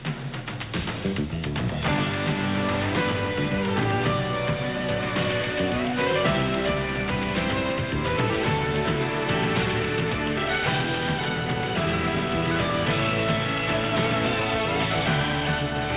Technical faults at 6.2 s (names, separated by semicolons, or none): none